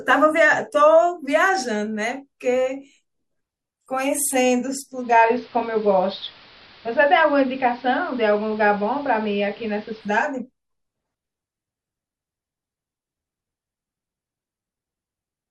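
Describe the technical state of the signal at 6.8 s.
At 6.8 s the receiver is in the analogue stretch of a digital radio blending to analogue event, running from 4.91 s to 10.35 s. Having lost the digital stream, it cross-faded over about 0.35 s to the station's AM broadcast, so a hiss floor sits roughly 25 dB under the speech, and the level shifts by about 2 dB. Unlike a simple low-pass filter, the hiss and the timed fades in and out mark a change of source.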